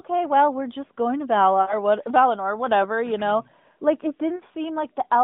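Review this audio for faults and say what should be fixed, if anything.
Two spots of lost AMR speech frames: 1.62 to 1.75 s and 4.36 to 4.42 s. In each, the sound smears into a held tone that sags in level, because the decoder kept reusing the last good pitch and vocal tract settings while turning the gain down. The first dropout sounds like a run of about three 20 ms frames and the second like about two. It's all heard through the narrowband AMR line, which tops out near 3.7 kHz. Stronger channel error protection or a more robust AMR mode would stop these.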